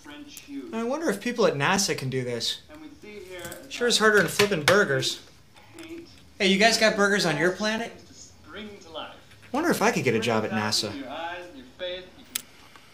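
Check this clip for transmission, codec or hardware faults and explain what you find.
One fault recurs through the clip: gaps between chunks.

Gap between chunks, at 1.76, 3.77, 5.78, 7.78, 9.79 and 11.8 s: the audio arrives in 2-second blocks, and about 7 ms of silence is left at each join before the next block starts. Nothing is lost, but the sound drops out in brief, hard-edged holes at a steady two-second rhythm.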